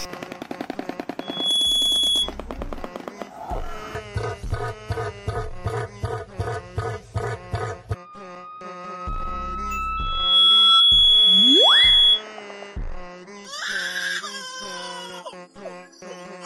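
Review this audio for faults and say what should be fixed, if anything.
Loudspeaker feedback squeal occurs twice, from 1.20 to 2.33 s and from 9.97 to 12.24 s, both times as a single tone at 3.4 kHz. The microphone is picking up its own loudspeaker, and at 3.4 kHz the loop gain exceeds one, so the tone swells within a fraction of a second to about 10 dB above the signal the first time and about 15 dB the second. Prevent it by lowering monitor gain, increasing mic-to-speaker distance, or notching 3.4 kHz.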